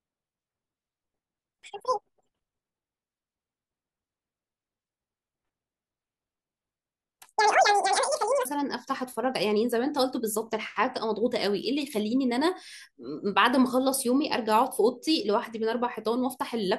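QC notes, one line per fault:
0.00–8.45 s: audio read two samples at a time (double speed). Each sample pair becomes one frame. So speech runs twice as fast, an octave up.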